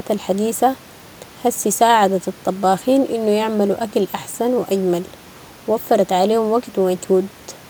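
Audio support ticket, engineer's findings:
No fault found in the speech clip. Room background noise audible, about 27 dB below speech, part of the recording, not the system.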